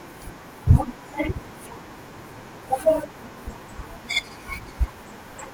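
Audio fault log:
4.23–4.33 s, frames out of order: two adjacent runs of coded frames were decoded swapped, so this short stretch of speech plays back half-for-half reversed, heard as a garbled flutter. The stretch length fits two runs of two frames, each run roughly 46 ms. Unlike a dropout or a stutter, nothing is lost or repeated and the timing afterwards stays intact.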